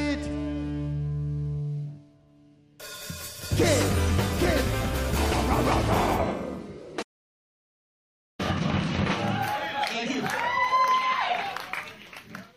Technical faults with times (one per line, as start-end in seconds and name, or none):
7.02-8.40 playback stall